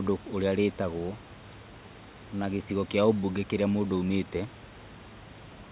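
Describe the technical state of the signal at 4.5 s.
At 4.5 s the signal is intact, with no dropout, glitch or other fault, just the narrowband sound of the call path and the quiet room noise well beneath the speech.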